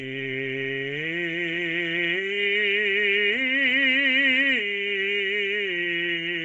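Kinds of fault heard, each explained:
Bluetooth LC3 compression: The music stops dead above 7.7 kHz and has a grainy, noisy top. This likely comes from a low-bitrate LC3 link filling emptied bands with noise.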